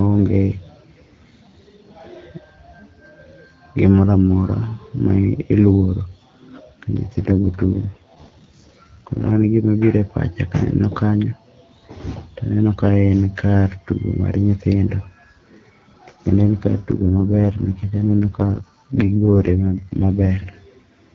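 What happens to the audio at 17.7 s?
An AMR rate drop spans 16.92 to 20.49 s. The network cuts the codec from 12.65 to 6.6 kbit/s. Speech turns rough and raspy, without a gap.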